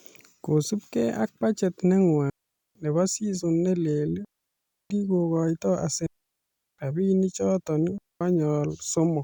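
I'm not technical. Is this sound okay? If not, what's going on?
No, it has a problem: four digital wireless dropouts, where the speech suddenly cuts to near silence. They land at 2.30–2.75 s (right after "kosubgei ak budget neng'wa"), 4.25–4.90 s (just after "nebo season ne leel"), 6.06–6.79 s and 7.98–8.21 s, each a quarter to three-quarters of a second long. The wireless receiver lost too much of its signal and simply muted, so you get clean holes with no crackle or hiss around them.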